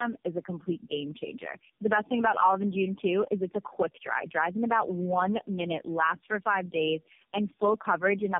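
This speech clip suffers from tandem speech coding from start to finish. Nothing reaches above 3.4 kHz. The sound is rough, muffled and warbly. That points to three low-rate AMR-NB passes, around 5 to 8 kbit/s, each coding the previous one's damaged output across G.711 links.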